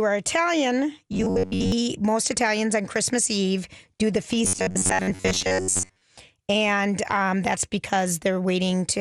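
Robotic sound from repeated short buffers occurs from 1.13 to 1.72 s and again from 4.45 to 6.02 s, just after "do the". The speech collapses into a rigid, metallic buzz at about 93.8 Hz that only loosely tracks the words. This is likely caused by new audio arriving too seldom, so a fragment of roughly 10.7 ms is replayed over and over, standing in for most of the real signal.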